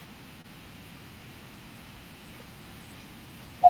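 At about 0.41 s there's a short concealed packet loss, running to roughly 0.46 s. Around 20 ms of the call didn't reach the decoder in time, so the receiver patched the gap with about 24 ms of made-up signal, extrapolating from what it had just played before blending back into the real audio. You hear it as a quick smear or wobble in the speech, over almost before it registers.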